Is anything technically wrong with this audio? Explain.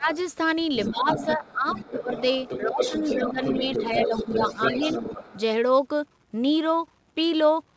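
Yes. Speech is suppressed in double talk from 0 to 0.13 s, 0.9 to 2.12 s, and 2.61 to 4.88 s. It dips by up to about 20, 15 and 10 dB. The likely cause is an echo canceller turning everything down while both sides talk.

The other side's voice leaks through faintly at 0.14 to 0.24 s, about 30 dB down. It returns strongly from 0.61 to 5.41 s, only about 5 dB below the speech. This points to loudspeaker echo left in the microphone. The audio also carries a call codec's band limit, with nothing above 8 kHz, which fits G.722 at 64 kbps.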